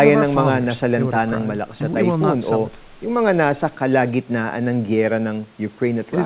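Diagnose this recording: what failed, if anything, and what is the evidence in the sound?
Nothing failed, and there is no evidence in the sound of any fault, only the narrow band of a G.711 call path with no content above 4 kHz.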